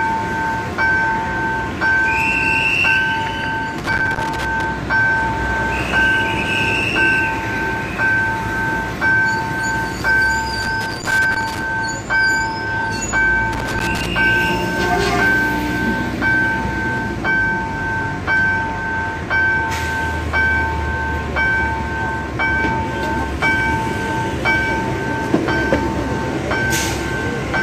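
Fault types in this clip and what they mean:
Loose connector crackle: a worn or dirty contact somewhere in the signal path is intermittently making and breaking, so the audio is chopped on and off in rapid, irregular succession, with pops where any DC offset on the line jumps. In this clip it appears as three separate bursts of scratchy crackle, from 3.78 to 4.64 s, 10.62 to 11.62 s and 13.53 to 14.06 s, each about a second long or less and ragged.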